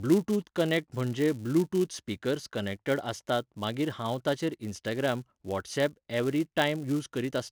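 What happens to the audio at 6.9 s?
At 6.9 s the speech carries the same 200 Hz buzz heard throughout: a filter restarted on every block, losing its state and starting each block from silence, so a small transient lands at every boundary. Unlike steady mains hum, this buzz rises and falls with the speech level.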